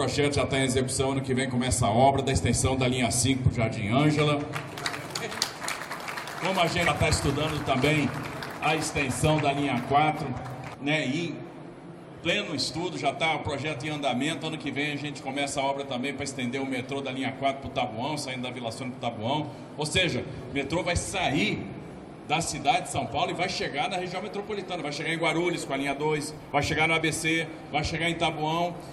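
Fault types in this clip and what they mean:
Damaged data in a compressed stream: a corrupted stretch of the encoded bitstream at 6.86 to 6.88 s. The decoder misreads the affected frame and loses sync until the next valid frame header, producing a brief glitch about 20 ms long in the sound.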